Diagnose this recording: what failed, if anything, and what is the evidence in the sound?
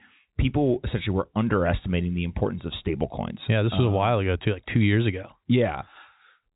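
Nothing failed: the speech shows only the expected signature of the G.711 telephone path, with a band edge near 3.8 kHz and nothing above it.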